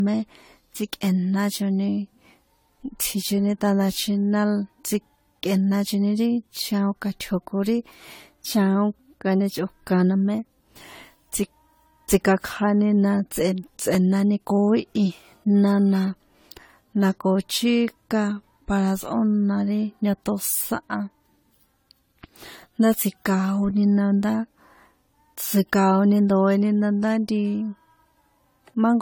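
Speech runs through the whole clip with a swirly, smeared and hollow quality, and consonant attacks blur. The likely cause is generation loss: repeated lossy encoding, around seven AAC-LC passes at 64 kbit/s, each re-quantising on a shifted frame grid so the damage stacks up. Two repeated buffer faults occur, at 13.94 s and 23.70 s. Each is a brief click or buzz. A 5.8 ms chunk plays twice because fresh audio arrived late, which fits a 256-sample buffer. A few milliseconds of sound are lost at each.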